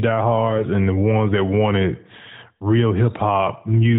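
AMR bit errors appear from 0.50 to 0.65 s, just before "and the ones that". Over a run of several 20 ms frames, roughly 3 percent of the weakly protected bits were flipped, while the checksum on the critical bits still passed. The excitation pulses land in the wrong places and the fine pitch, gain and spectral values drift. Pitch and loudness hold, but the sound turns briefly hoarse, scratchy and gargly. Around it, the narrowband AMR coding keeps everything below 4 kHz, with the light coloration expected of its highest-rate mode.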